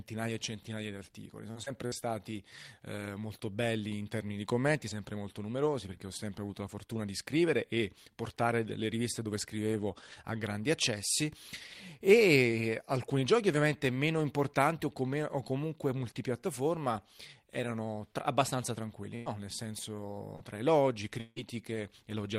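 Speech, with several kinds of packet-loss damage. From 1.51 to 1.94 s there is repeated packet loss, giving a choppy quality: three separate gaps, the longest 53 ms, are patched by extending the preceding sound. Concealment covers about 29% of that span. A burst of packet loss at 19.16 to 19.29 s replaces 100 ms of speech with a continuation of the last sound that fades as it goes, after which the audio picks up further on with that stretch missing. A shorter burst at 20.36 to 20.43 s, ending just before "tra elogi", conceals about 45 ms the same way. Three single packets were rebuilt from error correction at 19.26 to 19.28 s, 20.40 to 20.42 s and 21.36 to 21.38 s, each 20 ms long. There is no gap at those points, but the frames are rougher and noisier because they come from a low-bitrate redundant copy. Just after "tra elogi", from 21.20 to 21.39 s, the sound stretches into a fading buzz or hiss over about 160 ms and ends in roughly 10 ms of silence before the audio resumes with that portion gone, most likely a long network dropout.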